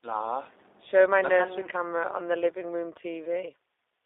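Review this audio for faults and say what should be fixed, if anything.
Throughout the speech, the sound is narrow and slightly rough and synthetic, confined to roughly 300 Hz to 3.7 kHz. This is G.729 codec damage, consistent with an 8 kbit/s stream rebuilding each 10 ms frame from a vocal tract filter, pitch predictor and sparse pulses. To prevent it, record or transmit with a wideband codec at a higher bitrate.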